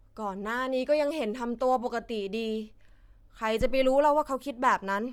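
Speech with plainly audible codec damage throughout: the top of the spectrum sounds grainy and breathy, as if partly replaced by noise. This is likely Bluetooth LC3 compression, whose transform coding texture fits 10 ms frames at around 48 kbps.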